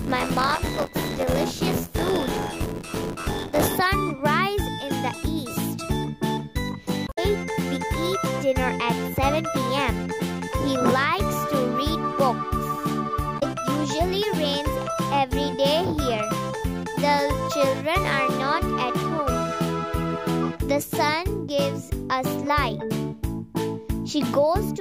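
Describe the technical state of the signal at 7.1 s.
Damaged data in a compressed stream sits at 7.04 to 7.19 s, covering the 7.1 s moment. Across those roughly 0.14 seconds, part of the encoded bitstream is corrupt, so the decoder can no longer parse the affected frames correctly. It loses frame sync, discards or misinterprets what it reads, and hunts forward for the next valid frame header before normal decoding resumes. The result is a short, harsh, synthetic blip that breaks the continuity of the sound.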